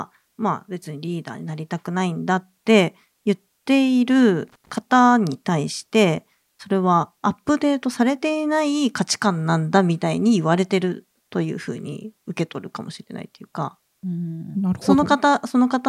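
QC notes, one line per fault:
4.48 to 4.78 s, loose connector crackle: an irregular burst of scratchy crackle lasting about 0.3 s breaks into the speech. A worn or dirty contact is rapidly losing and regaining connection as it shifts, chopping the signal.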